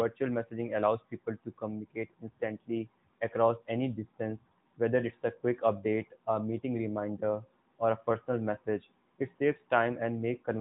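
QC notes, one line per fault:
Nothing stood out on listening to this speech clip.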